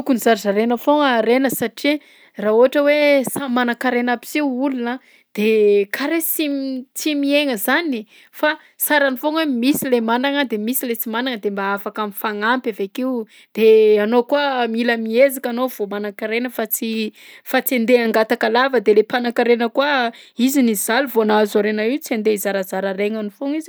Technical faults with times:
none

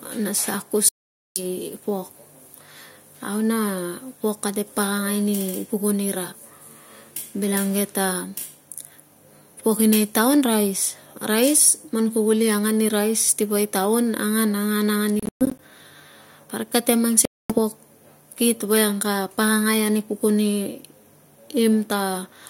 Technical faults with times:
0.89-1.43 Bluetooth dropout
15.20-15.59 Bluetooth dropout
17.25-17.59 Bluetooth dropout

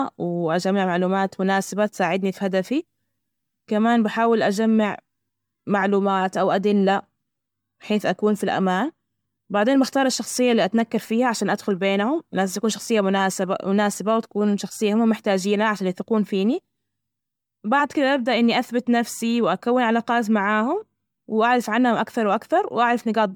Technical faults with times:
0.00-23.36 generation loss

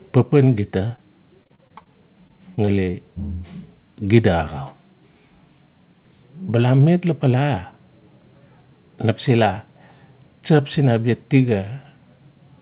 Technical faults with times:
0.00-12.61 channel delay (comb filtering)
0.88-0.99 short concealed packet loss
1.43-1.88 repeated packet loss (robotic sound)
2.28-2.95 repeated packet loss (robotic sound)

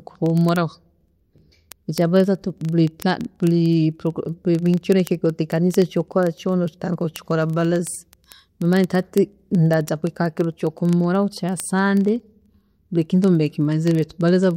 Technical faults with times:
0.11-14.55 word clock ticks

